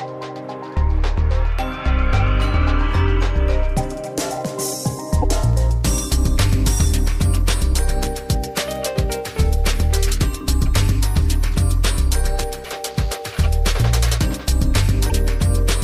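At 5.21 to 5.24 s, 12.63 to 12.66 s and 15.09 to 15.12 s the sound jumps ahead and a brief glitch replaces about one 26.1 ms frame each time. The likely cause is a broken MP3 bit reservoir: after frames went missing, the next frame borrowed its data from the wrong bytes. On a spectrogram each shows as a thin vertical disturbance, and the waveform shows a discontinuity.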